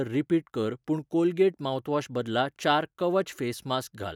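A short bit of speech, and nothing in it sounds technically wrong at any point.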